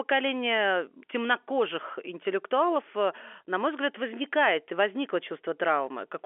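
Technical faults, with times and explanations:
No technical faults are audible.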